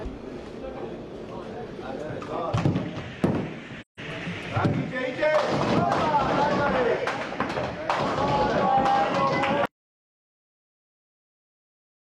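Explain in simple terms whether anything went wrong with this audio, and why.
AAC frame loss with muting, 3.81 to 4.0 s: a short stretch of compressed audio went missing, so the decoder played silence, fading out and back in around the gap.

Audio dropout to silence, from 9.66 s to the end: the sound cuts off into silence with no room tone left, likely because the input was lost while recording continued.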